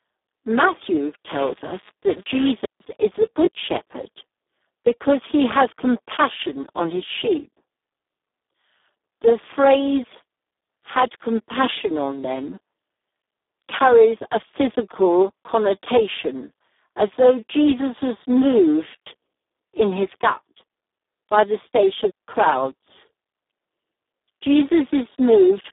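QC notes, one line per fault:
Throughout: Speex codec. The speech sounds hoarse, grainy and close to robotic, with a narrow telephone-like band of roughly 250 Hz to 3.6 kHz and nothing at all above 3.8 kHz. This is heavy damage from Speex running at a very low rate, about 4 kbps, which fits its lowest settings. There are so few bits left for the excitation signal that the codec behaves almost like a vocoder, and the natural texture of the voice is replaced by a coarse, noisy buzz.
1.31 to 2.49 s: buffer tearing. For just over a second, a steady robotic rattle at 200 Hz sits on top of the speech and is heard only while sound is present. The program filling the ring buffer and the hardware reading it have drifted together, so they cross once in every period. A small slice of each buffer, around 2 percent, still holds audio from roughly 10 ms earlier, and the hard joins on either side of it repeat at the buffer rate. 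That repetition is heard as the buzz. The 200 Hz rate fits 5 ms periods.
2.65 s and 22.10 s: digital wireless dropout. The sound drops into clean, near-total silence for 155 ms at 2.65 s, and again for 171 ms at 22.10 s. There is no click or noise burst at either edge. The digital wireless link lost too much data, so the receiver muted its output behind a very short fade rather than play corrupted audio, and that leaves a neat hole in the sound.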